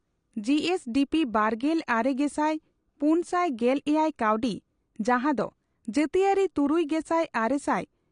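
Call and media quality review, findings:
Speech dull and smeared for the whole clip, nothing above 10 kHz, plainly audible codec damage with a warbly, fizzy edge on sibilants and held sounds. Likely AAC compression, AAC-LC encoder starved of bits, which fits a low bitrate around 32 kbps. Encoder dropped the top band and quantised what's left coarsely. Worth checking the encode settings on this path.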